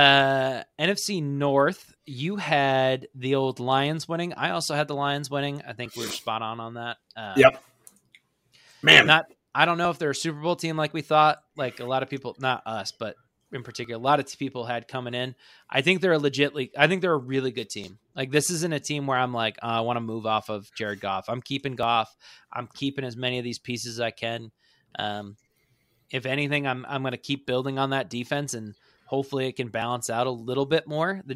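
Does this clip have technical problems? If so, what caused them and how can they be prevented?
Yes. The speech has brief skips at 9.85, 13.85, 17.84, 21.83 and 29.82 s. Each loses well under ten milliseconds of sound, and the two sides are butted together with no gap. The skips fall on a grid of about 4 s. The likely cause is audio missing between chunks: the recorder handles 4-second blocks and drops a sliver while closing one and opening the next. Prevent this by using gapless, overlapping or double-buffered chunk handling.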